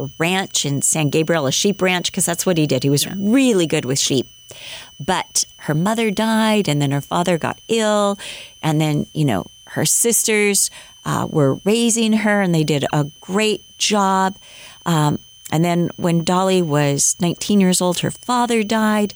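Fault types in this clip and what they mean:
switching supply whistle: a power supply's switching frequency falls into the audible range, heard throughout as a thin whistle around 3 kHz, drifting between 2.94 and 3.11 kHz, about 30 dB below the speech.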